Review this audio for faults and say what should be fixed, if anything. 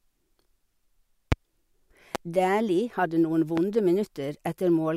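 A sudden voltage step, likely from a loose connector, a switch or a static discharge, was added to the speech signal three times. Each produced a single loud pop at 1.32–1.35 s, 2.15–2.18 s and 3.57–3.60 s, peaking about 20 dB above the speech the first time and about 15 dB the other two, with the speech continuing underneath. Securing cables, switching equipment before recording and grounding against static would prevent them.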